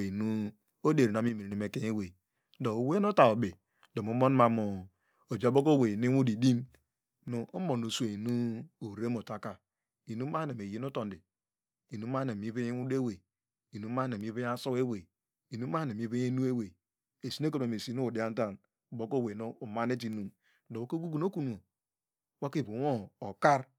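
A speech clip in which the level drops abruptly, with the voice and the background noise falling together by about 6 dB, first from 1.29 to 1.52 s and then again at 7.28 s, staying down to the end. These are sudden gain jumps: the digital gain steps from one sample to the next with no ramp, most likely because a gain setting or bit shift was applied instantly rather than faded in.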